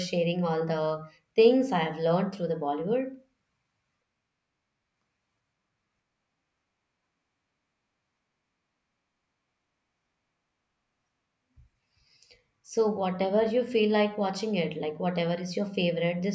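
No technical faults can be heard anywhere in this speech recording. There is no moment in the audio that calls for a time or a fault description.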